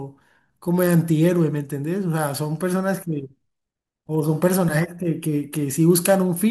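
Listening through the speech, nothing technically wrong stood out at any point.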